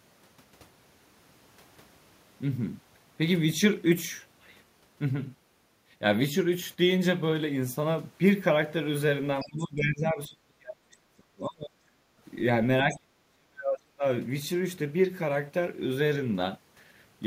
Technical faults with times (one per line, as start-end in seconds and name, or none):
9.43-11.78 speech suppressed in double talk
12.06-12.22 background gated by the echo canceller
12.83-14.04 speech suppressed in double talk